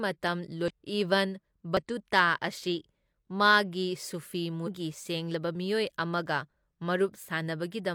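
Damaged data in a compressed stream breaks into the speech three times: 0.66 to 0.71 s, 1.77 to 1.83 s, and 4.63 to 4.69 s, each lasting roughly 45 to 60 ms. At those points the encoded bytes are corrupt, so the decoder misreads the affected frames, loses its place in the stream and has to hunt for the next valid frame header. Each break comes through as a short glitch.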